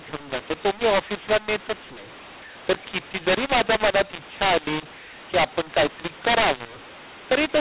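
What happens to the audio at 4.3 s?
At 4.3 s, as throughout the clip, mu-law and A-law are mixed up: mu-law-coded telephone speech decoded as A-law scrambles levels, giving harsh distortion and noise-filled pauses.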